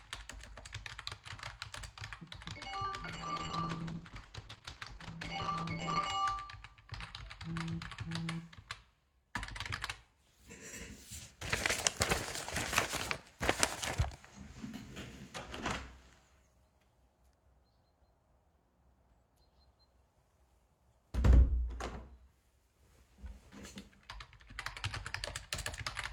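A call bitrate drop runs from 3.08 to 6.17 s. The encoder was forced to spend far fewer bits, and the audio turns coarse, watery and muffled as the highs are cut, which fits a fall from about 128 kbps to 12 kbps, held for roughly 3 s before recovering.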